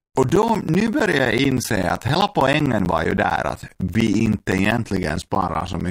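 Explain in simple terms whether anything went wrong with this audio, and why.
Something went wrong. From 0.10 to 5.81 s, periodic USB or driver dropouts punch about a hundred tiny silent gaps, each roughly 10 ms, into the speech every 0.064 s. Their clockwork regularity, ticking only while sound plays, distinguishes them from a loose cable's random crackle.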